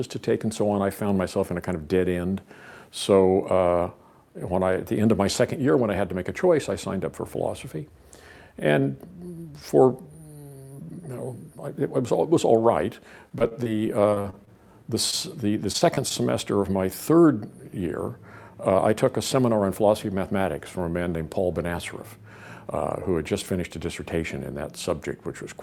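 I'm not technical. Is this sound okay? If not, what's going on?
No. Around 13.29 to 13.71 s, 14.10 to 14.49 s and 15.72 to 16.12 s there is repeated packet loss: pieces of the audio kept failing to arrive, and each hole was patched by stretching what came before. The sound turns choppy and robotic, with small bits missing.

At 15.11 to 15.14 s there is a short concealed packet loss. A few hundredths of a second went missing once, and the gap was filled by briefly continuing the previous sound, leaving a quick smear or wobble.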